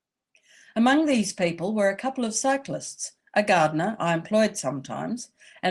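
Nothing is technically wrong with this speech clip.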